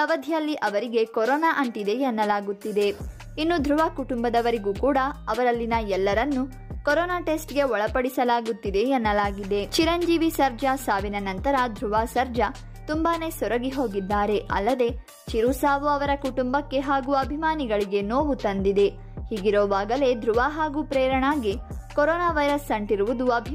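No technical fault can be heard anywhere in the audio, with no interruption, distortion or other disturbance to the signal at any point.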